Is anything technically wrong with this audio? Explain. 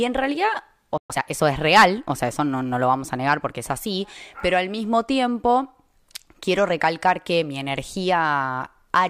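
Yes. At 0.97 s a playback stall cuts the speech to silence for about 120 ms, likely because the player ran short of buffered data or its thread was blocked. From 1.10 to 1.22 s a time-compressed catch-up follows: the player removes the backlog by splicing out short segments with cross-fades, so the speech runs at twice normal speed and keeps its pitch.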